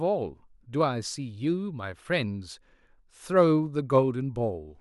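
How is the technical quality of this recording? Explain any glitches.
The recording carries one glitch: a single sharp click at 3.58 s. This is dropped samples. A tiny piece of the stream, on the order of a couple of samples and far shorter than a millisecond, is likely missing, so the waveform leaps straight from one value to a later one. That instantaneous step is far too brief to remove any of the speech, but it sounds as a brief tick and shows as a thin vertical line across the spectrum.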